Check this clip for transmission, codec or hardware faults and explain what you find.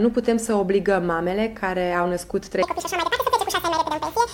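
One fault is present. From 2.62 s to the end at 4.34 s there is a section at the wrong speed. It plays at 1.95 times its original rate, likely because it was resampled against the wrong clock. Tempo and pitch rise together, so the sound turns hurried and about ten semitones higher.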